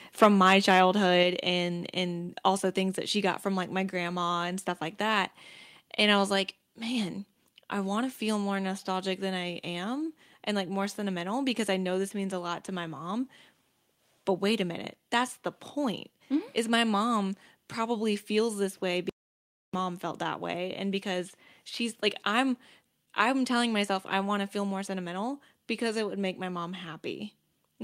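From 0.22 to 0.8 s the speech carries microphone overload. The loudest peaks press about 7 dB past the converter's ceiling, and roughly one sample in a hundred is flattened at the converter's limit, so those syllables gain a harsh, crackling edge. The input level was likely set too high. The grit rides only on the peaks and quieter parts stay clean, which marks it as hard clipping at the converter rather than overall noise or a gentle limiter.

Right inside that stretch, at 0.24 s, comes a microphone volume step-down: voice and background fall together by about 3 dB in one instant. A second step of about 4 dB lands at 1.23 s, just before "and and also things". Both likely come from call software reacting to the overload by cutting the device's input gain. Because the room tone drops along with the speech, these are level changes at the source, not a speaker moving away from the microphone or a fading mix.

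At 19.09 s, after "probably feels this way", there is an audio dropout to silence lasting about 0.64 s, and the sound returns on "felt that way and". The input was likely lost while silence kept being written. The gap is silent with no room tone, which sets it apart from a pause in speaking or a noise gate. Whatever came in that moment is missing, rather than muffled or garbled as in packet-loss concealment.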